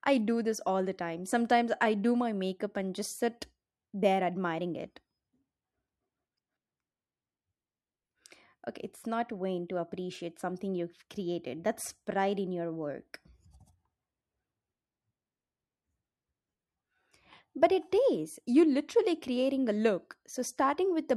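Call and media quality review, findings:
No audible faults found in the speech recording; no dropouts, distortion or timing problems to log against any component.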